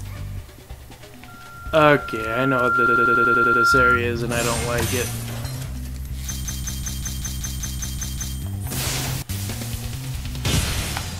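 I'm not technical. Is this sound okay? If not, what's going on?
No. From about 1.28 s to 4.05 s there's a loudspeaker feedback squeal: a microphone is hearing its own speaker, and a single high tone around 1.4 kHz swells up over a second and a half or so into a piercing whistle before it stops.

There are also repeated frames, where a tiny chunk of audio plays again and again like a skipping CD. From 2.86 s to 3.63 s a 96 ms slice loops, and from 6.45 s to 8.37 s a 192 ms slice does, stretching the clip by roughly 2.7 s in total.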